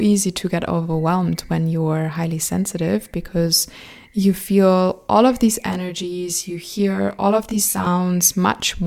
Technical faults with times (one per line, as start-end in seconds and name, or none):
5.66-7.87 channel delay (comb filtering)